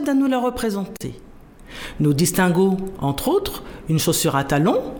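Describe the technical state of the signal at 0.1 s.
The audio at 0.1 s is intact, with no fault present at that moment.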